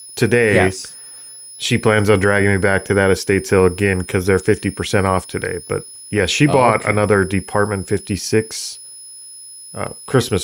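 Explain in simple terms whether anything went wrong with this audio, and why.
A thin, high whistle sits behind the speech from start to finish, hovering around 5 kHz and wandering slightly between about 5.1 and 5.2 kHz. This is a switching supply whistle: a switching power supply is cycling at a rate we can hear, and it leaks into the recording. Mains hum is a low, steady buzz, but this is high-pitched and its pitch drifts.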